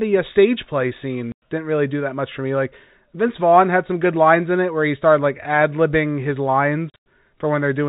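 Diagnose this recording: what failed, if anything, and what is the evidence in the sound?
Hard-edged holes of dead silence at 1.32–1.42 s, between "uh stage play" and "didn't really do that", and across 6.9–7.06 s after "like ad libbing his". This is network packet loss filled with silence: the receiver played silence for missing packets, with gap lengths that fit 20 ms packets.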